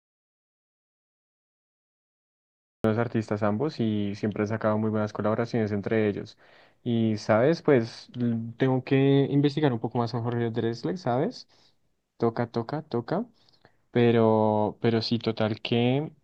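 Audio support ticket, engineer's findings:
Audio dropout to silence from 0.0 to 2.84 s, already under way at start: flat waveform, blank spectrogram, no room tone. Input likely lost, with the recorder writing silence.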